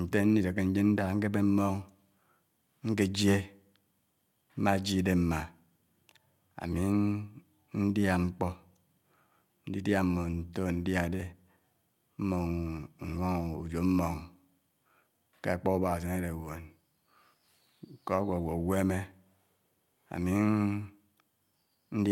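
No technical faults can be heard anywhere in this recording.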